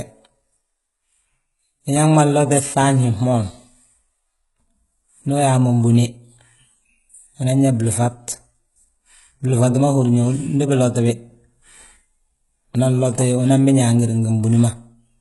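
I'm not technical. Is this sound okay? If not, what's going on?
No. Throughout, the speech sounds gritty, with metallic, lispy s sounds, likely from heavy HE-AAC compression, which fakes the treble instead of keeping it.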